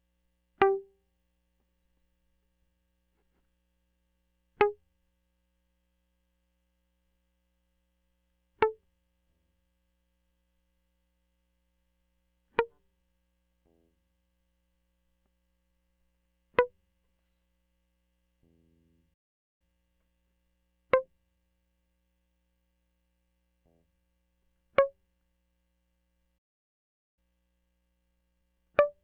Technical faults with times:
19.13-19.61 playback stall
19.61-22.61 time-compressed catch-up
26.37-27.19 playback stall
27.19-28.77 time-compressed catch-up

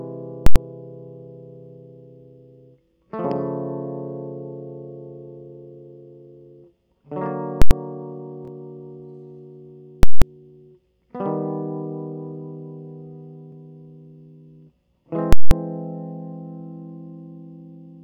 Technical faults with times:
0.46-0.56 invalid numbers at full scale
7.62-7.71 invalid numbers at full scale
10.03-10.22 invalid numbers at full scale
15.33-15.51 invalid numbers at full scale

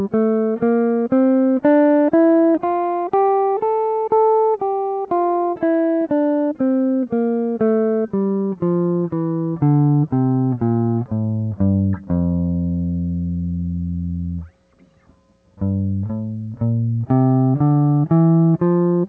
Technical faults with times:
none

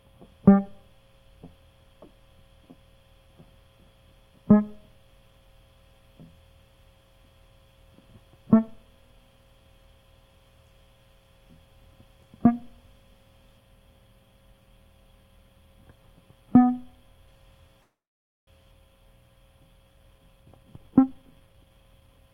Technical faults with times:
17.81-18.49 call audio freeze
19.87-22.33 jitter buffer speed-up

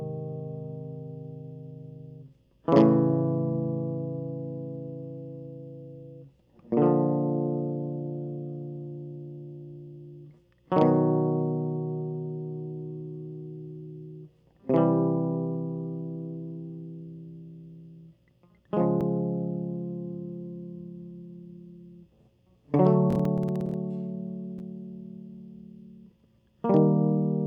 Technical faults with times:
23.10-23.74 processor overload crackle

